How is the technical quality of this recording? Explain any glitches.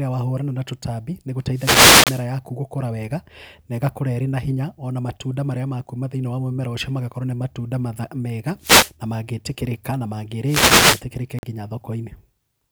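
The speech has two recurring problems: bursts of radio noise and brief silent gaps.

Three wireless microphone noise hits occur, from 1.52 to 2.27 s, from 8.60 to 8.94 s, and from 10.45 to 11.04 s. Each is a swish of static over the voice. An analogue FM radio link fades when reflected signals cancel. The receiver's noise then rises and can break into clicks. The longest hit lasts about 0.75 s.

Two Bluetooth dropouts follow. The first runs from 2.04 to 2.07 s, a 29 ms hole inside the first noise hit. The second runs from 11.39 to 11.43 s, a 43.5 ms hole. The output goes silent, then resumes further along, as if it had kept playing. The likely cause is audio packets arriving too late at the headphones and being dropped. The gap lengths fit two and three lost packets.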